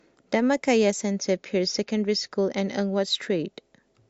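From 1.02 to 3.02 s the speech drops abruptly to an adaptive stream at a lower bitrate, with no gap. Nothing is audible above 7.2 kHz, and codec artefacts thicken. This fits a switch from roughly 128 to 48 kbit/s MP3 after the connection slowed.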